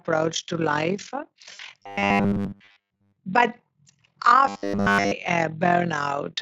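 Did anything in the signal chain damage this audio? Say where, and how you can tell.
Yes. The audio is damaged in three places along the chain.

Overlap-add ripple runs through the whole clip. The level pulses by about 11 dB at a rate of roughly 40 Hz, heard as a fast, rough tremolo on all the speech. This points to a frame-based processing stage, such as call processing or resynthesis. The windowed frames were overlapped so their gains don't sum to a constant, so the level dips once per frame.

VoIP packet loss concealed by the speech codec appears from 1.53 to 1.60 s, just after "to life". For about 60 ms, which fits three lost 20 ms frames, the sound is stretched out and fades. The fault is at the network. The Speex decoder, which otherwise shows little coding damage of its own, filled the gap by extrapolating from its last pitch and filter while lowering the gain.

Robotic sound from repeated short buffers appears from 1.80 to 3.17 s and from 4.47 to 5.13 s. 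A rigid, metallic buzz at 100 Hz sits on the speech. It covers most of the first stretch and essentially all of the second. A 100 Hz buzz matches a 10 ms block being replayed. The likely cause is a driver or buffer stage that was starved of new audio and repeated its last block, skipping the real material.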